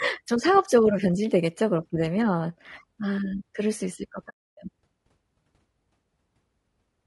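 Throughout the speech there is a rough, grainy texture, with noise filling the gaps between harmonics and a thin, synthetic-sounding top band. This is plainly audible codec damage, likely from low-delay AAC compression, whose short frames resolve pitch poorly at a bitrate around 32 kbps.

From 4.29 to 4.58 s the audio drops out for about 280 ms. This is AAC frame loss with muting, which fits roughly fourteen lost frames whose spectrum the decoder zeroed. Overlapping windows fade the sound out and back in, leaving a soft-edged hole.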